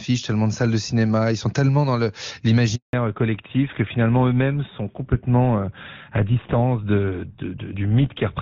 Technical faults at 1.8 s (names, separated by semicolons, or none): none